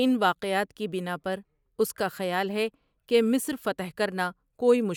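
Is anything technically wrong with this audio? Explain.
No, nothing stood out as technically wrong on listening to this speech recording.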